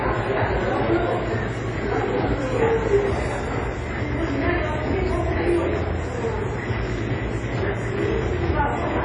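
A recording of sounds, ringing and washy throughout, with breathing hiss and nothing above 10 kHz, likely WMA compression at a low bitrate around 32 kbps. Its ringing, washy smear distinguishes it from a simple low-pass.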